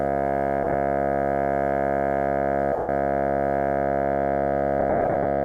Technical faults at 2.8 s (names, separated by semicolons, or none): lost LE Audio frames